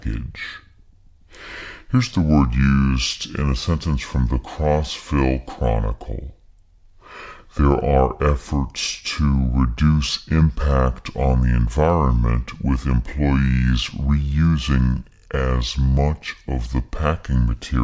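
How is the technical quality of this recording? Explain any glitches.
The recording has a wrong sample rate fault throughout. Speech runs at two-thirds speed and about 7 semitones low, which fits 24 kHz audio played back unconverted at 16 kHz, so voices sound slow and deep.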